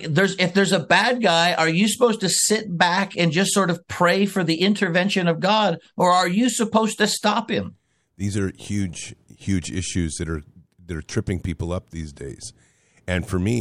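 Nothing in the speech recording stood out as a technical problem on listening.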